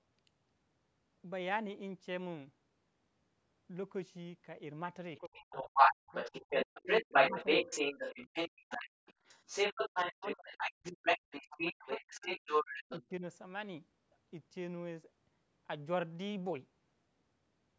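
Other side's voice leaking through runs from 5.17 to 13.05 s. A second voice comes through under the talker in that stretch, about 10 dB above the talker's level. The likely cause is a loudspeaker playing the far end into the microphone while the echo canceller fails to subtract all of it. What leaks is band-limited like the rest of the call path, with nothing above 8 kHz.

Speech suppressed in double talk begins at 5.2 s and lasts to 7.67 s, overlapping the leak. About 1.5 s of that stretch is affected. The talker's voice dips by as much as about 40 dB while the other side is also talking. This is likely the canceller mistaking the near voice for echo and turning everything down together.

Background gated by the echo canceller appears from 8.51 to 9.06 s, about 0.3 s in total. The room sound drops by about 29 dB, leaving a sudden hole in the ambience that fills back in once the canceller releases. 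This hard gate is applied while the loudspeaker signal is playing.

Speech suppressed in double talk returns from 9.88 to 12.27 s, again about 1.5 s affected and as deep as about 40 dB, so the talker fades. A shorter dip follows from 13.02 to 13.24 s, about 0.1 s long and about 15 dB deep, right as the leaking voice ends.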